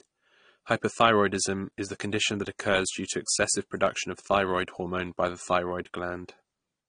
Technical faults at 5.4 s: AAC compression

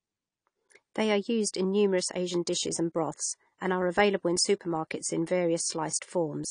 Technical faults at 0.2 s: AAC compression

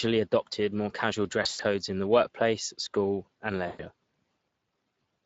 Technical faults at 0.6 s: Speex codec

